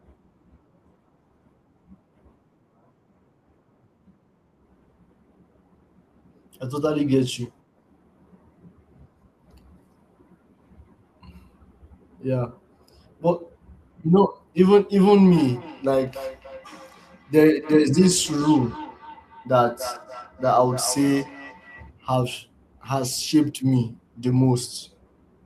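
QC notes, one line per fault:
15.27–21.91 s, feedback echo between two devices: speech comes back at a steady interval of roughly a third of a second, thin and ringing, peaking about 17 dB below the original. A second device replays this microphone's signal, which the local canceller never removes; reverb would smear rather than repeat.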